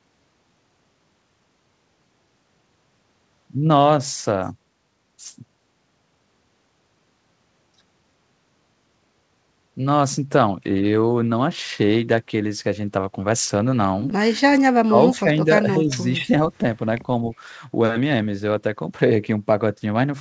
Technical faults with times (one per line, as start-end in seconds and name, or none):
14.53-15.27 speech suppressed in double talk
15.64-16.31 speech suppressed in double talk